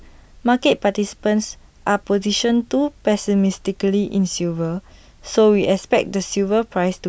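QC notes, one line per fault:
No faults detected.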